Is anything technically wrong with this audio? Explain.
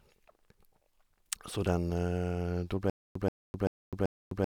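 Yes. From 2.90 s to the end, a stutter with silent gaps: a 130 ms burst repeats four times every 386 ms with 256 ms of digital silence between, likely a stalled stream replaying its last fragment, showing as identical blocks separated by flat, empty stretches.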